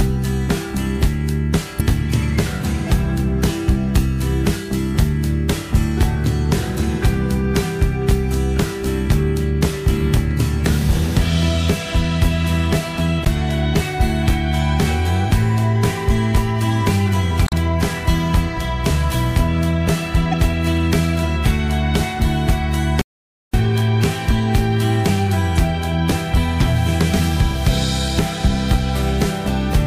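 The audio carries damaged data in a compressed stream at five points: 1.77–1.81 s, 13.25–13.28 s, 17.44–17.53 s, 20.31–20.34 s and 25.53–25.59 s. Each is a brief chirp or blip. Corrupted frames throw the decoder off. It loses sync and skips ahead to the next frame header. There is also an audio dropout to silence from 23.02 to 23.54 s. For about 0.52 s the sound cuts to silence, with no background left. The input was likely lost while the recorder kept writing silence.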